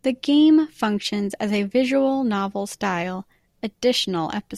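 No audible faults turn up anywhere in this recording.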